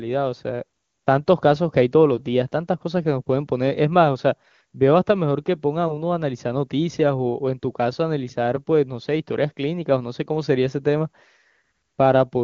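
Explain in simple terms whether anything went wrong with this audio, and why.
Nothing went wrong with this speech: it passes through the AMR wideband (HD Voice) phone codec at that codec's top quality setting, where any trace of the compression is faint at most.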